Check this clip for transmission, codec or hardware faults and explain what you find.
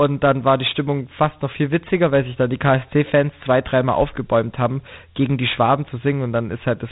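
The speech carries one codec fault throughout: Dialogic VOX ADPCM. A grainy, gritty hiss rides along with the speech from start to finish, and the sound is dull and boxed in, with nothing above 3.8 kHz. The coder stores each sample as a 4-bit step relative to a running prediction, so coarse step sizes leave quantisation noise that tracks the signal. The narrow band and plainly audible damage fit a 32 kbps stream.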